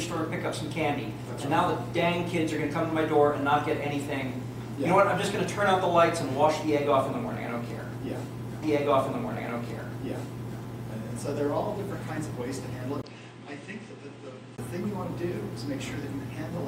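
From 8.62 to 10.61 s, the audio shows a stream segment repeated: about 2.0 s of programme plays again after a small blip at the jump back. Because it is an exact replay of earlier material rather than a decaying echo or stutter, it points to the player queuing the same segment twice. From 13.02 to 14.58 s, the sound turns dull, with nothing above 9 kHz, after a 20 ms silence at the switch. It also drops a few decibels in level and gains its own faint background noise, roughly 35 dB below the signal. Those last two changes set it apart from a simple low-pass filter and mark it as likely an input switched to a poorer device.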